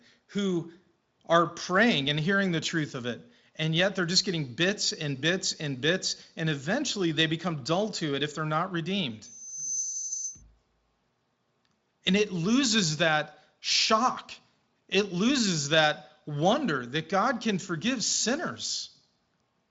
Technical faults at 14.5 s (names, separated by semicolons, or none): none